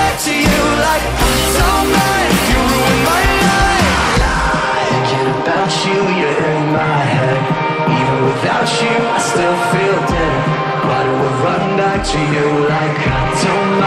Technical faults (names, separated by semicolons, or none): none